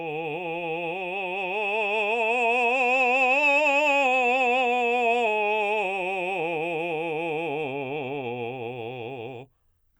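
No technical faults can be heard anywhere in the music.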